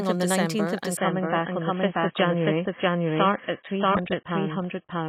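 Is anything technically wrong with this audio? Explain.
Yes, there are two faults. Throughout the speech, a second full-band copy trails the original by roughly 0.7 s at about the same level, with no decay or room colour. This is likely a doubled audio track, where the speech is captured twice through paths of different speed and mixed together out of step.

From 0.97 s to the end, the treble suddenly vanishes above 3.8 kHz and codec smearing rises, with no gap at the switch. This is an adaptive stream at a lower bitrate: the player dropped to a far leaner encoding, consistent with a fall to around 16 kbit/s.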